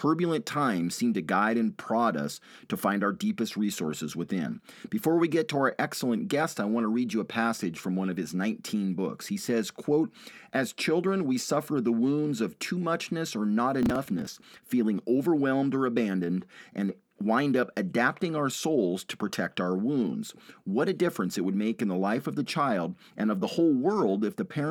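From 13.83 to 14.58 s there is processor overload crackle: many short buffers, around 5 ms each, are skipped outright, giving a gritty tearing burst.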